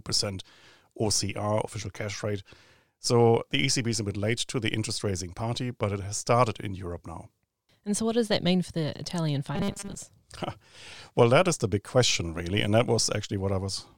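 From 9.55 to 9.95 s the speech shows robotic sound from repeated short buffers. New audio was likely arriving too seldom, so playback filled the gaps by looping a very short slice, which fits a 5 ms buffer, while the real audio in between was lost. Across most of this stretch the looping imposes a fixed pitch of 200 Hz, turning the voice into a rigid metallic buzz that only loosely tracks the speech.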